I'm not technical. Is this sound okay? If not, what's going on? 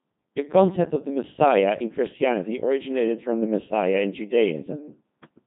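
No. For the whole clip, from the start to the end, the speech has been through a Codec 2 vocoder, a very low-rate digital-radio voice coder. It doesn't keep the original waveform. It sends only a rough outline of pitch, loudness and tone colour, then rebuilds the voice from simple tones. That is why the speech sounds robotic and buzzy. The damage here is heavy, and nothing above about 3.8 kHz survives, so the sound is also dull and muffled.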